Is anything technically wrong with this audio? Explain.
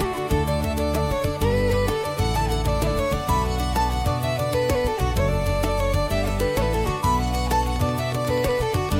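Yes, there's a train of clicks from 7.51 to 8.9 s: around ten same-shaped pops at a steady 8 per second, peaking about 5 dB above the sound. It's likely interference or a faulty connection or power supply injecting pulses, heard as regular ticking over everything.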